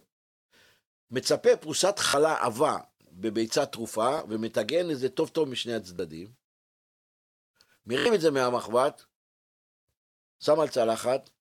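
Repeated buffers stutter the speech at 2.09–2.14 s, 4.18–4.20 s, 5.97–5.99 s and 7.99–8.06 s. Each time, new audio arrived late and the same 23 ms slice, which fits a 1024-sample buffer, replayed one to three times with hard joins. This causes brief stutters and drops some 20–70 ms of speech.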